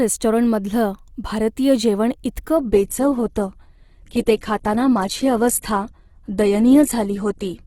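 From 2.57 s to the end, the player falls back to an adaptive stream at a lower bitrate. Quality drops abruptly without a gap, nothing remains above 12.1 kHz, and artefacts rise.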